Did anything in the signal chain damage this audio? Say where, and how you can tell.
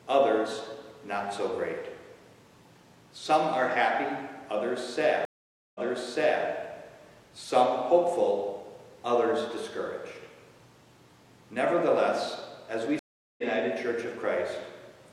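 Yes: a stream reconnect at the network stage, at 5.25–6.44 s and 12.99–13.43 s. Each time the connection dropped and a fresh decoder restarted mid-stream. After 0.5 s of silence the first resumes 0.7 s earlier, repeating audio. After 0.39 s the second skips roughly half a second ahead.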